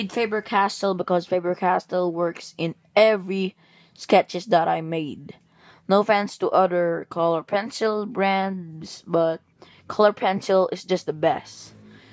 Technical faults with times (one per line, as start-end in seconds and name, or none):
none